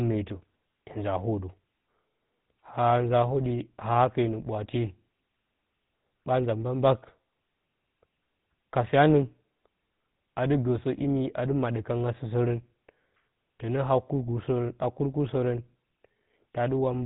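From start to finish the speech carries the damage of the GSM full-rate codec: the vocal tract is modelled and driven by coarse, regularly spaced pulses, giving a plainly audible buzzy, gravelly grain, with nothing above 3.9 kHz, consistent with 13 kbps GSM. Unlike simple telephone band-limiting, the roughness sits inside the voice itself.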